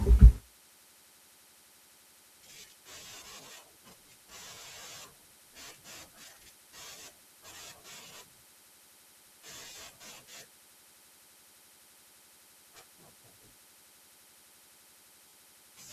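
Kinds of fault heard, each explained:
Lost LE Audio frames: brief 30 ms and 40 ms dropouts at 4.54 s and 15.29 s, which the decoder concealed by repeating recent spectrum, leaving a short noisy smear.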